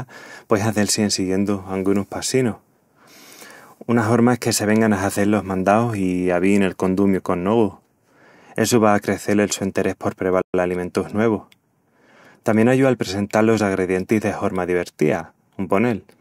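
At 10.42 s the speech drops to silence mid-flow for 120 ms before picking up again at 10.54 s. This is a playback stall: the player likely ran out of buffered data or had its thread blocked, so output stopped until it recovered.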